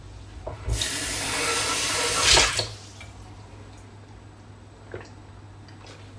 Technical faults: none

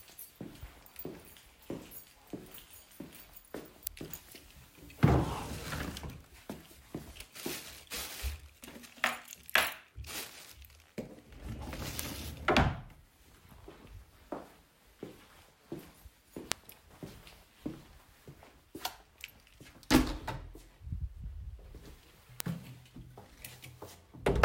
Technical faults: bit error spike

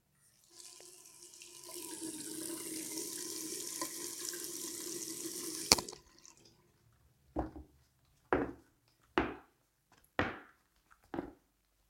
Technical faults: electrical switching spike

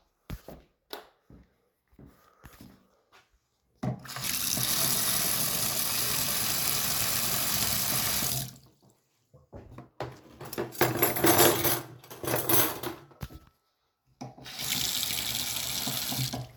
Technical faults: compressed frames skipped

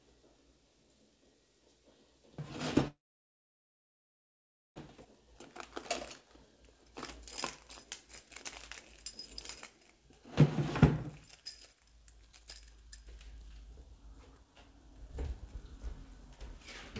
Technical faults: call audio freeze; jitter buffer speed-up

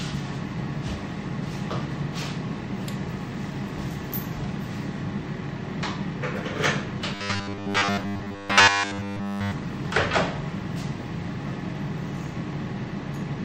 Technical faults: robotic sound from repeated short buffers

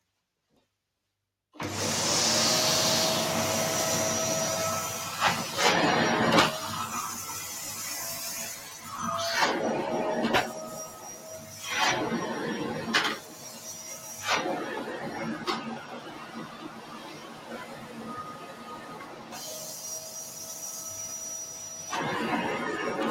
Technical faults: noise suppressor applied to music or sounds; sound cut by the noise suppressor

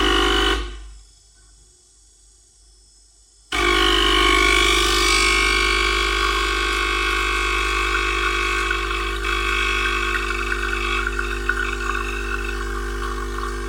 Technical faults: channel delay (comb filtering)

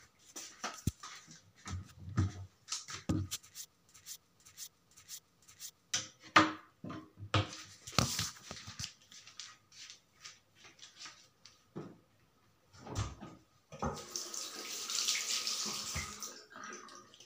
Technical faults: broken-record loop

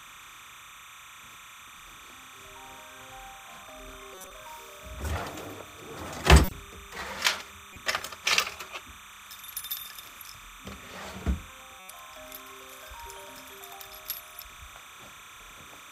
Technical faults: timecode bleed; corrupt frame decoded

